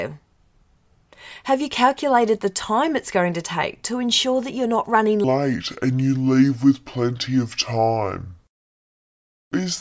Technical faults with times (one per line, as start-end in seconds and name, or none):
5.24-9.81 wrong sample rate